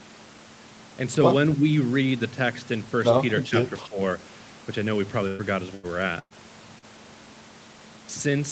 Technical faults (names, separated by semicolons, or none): speech suppressed in double talk; burst of packet loss; short concealed packet loss